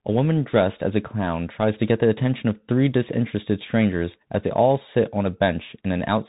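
Throughout, Bluetooth CVSD headset codec damage: nothing passes above 3.8 kHz, and the one-bit delta stepping leaves granular hiss and scratchy s sounds, unlike smoother narrowband codecs.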